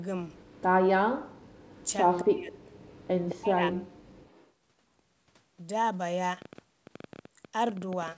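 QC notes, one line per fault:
0.35–0.62 s, 1.6–2.24 s, 2.72–3.35 s, 4.2–4.5 s: echo leak. A faint copy trails the speech by 215 ms at about 35 dB down, about 20 dB down at 2.72 s. The likely cause is a far-end loudspeaker pickup that the echo canceller failed to remove.
0.89–1.37 s, 2.22–2.54 s, 3.34–3.76 s: speech suppressed in double talk. The talker dips by up to roughly 40 dB, likely because the echo canceller attenuated near-end speech during overlap.
6.42–8.17 s: train of clicks. Same-shaped ticks arrive irregularly at 10.7 per second, peaking around 5 dB above the signal, likely from electrical interference or a faulty connection or power supply.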